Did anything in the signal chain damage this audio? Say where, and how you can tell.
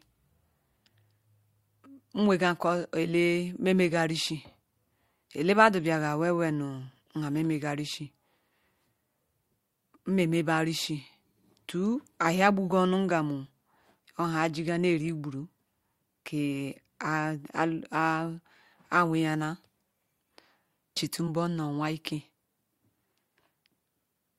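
Yes, at the codec decode stage: compressed frames skipped around 21.27 to 21.29 s, where the speech jumps ahead by roughly one 10 ms frame.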